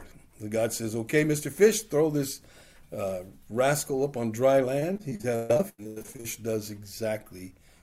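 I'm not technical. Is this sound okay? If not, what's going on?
No. From 4.79 to 6.37 s there is repeated packet loss (robotic sound). Pieces keep dropping out, and the patches sound choppy and robotic.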